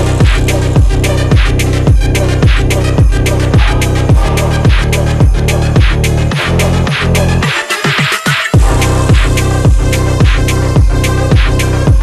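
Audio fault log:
Nothing here catches the ear as a technical problem; the audio just runs along without any hiccups worth logging.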